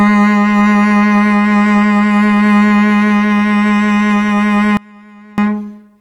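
Throughout the music, clock drift between sender and receiver is present: the sender's clock runs roughly 3% slower than the receiver's, so the jitter buffer keeps draining. The receiver has to stretch what arrives to stay fed, and the timing never sits quite still.

From 0.02 s to 5.66 s, repeated timing corrections pad the stream by repeating short pieces, adding about a fifth of a second in total and running the music at 97% speed. Each edit is small and unevenly spaced, heard as faint hiccups and a slightly dragging, unsteady tempo.

From 4.77 s to 5.38 s there is an audio dropout to a faint residue, likely the signal being lost while the path after the break stayed live. For 0.61 s the music cuts abruptly to a faint trace about 25 dB below its normal level, then snaps back.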